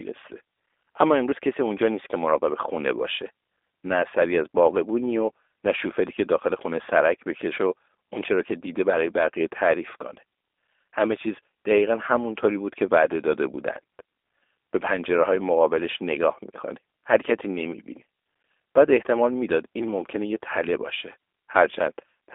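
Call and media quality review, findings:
G.729 codec damage, whole clip: speech band-limited to roughly 300 Hz–3.6 kHz, spectrogram empty above 3.7 kHz, plainly rough, buzzy texture from frame-by-frame filter-and-pulse resynthesis, sound consistent with an 8 kbit/s G.729A leg on the call path.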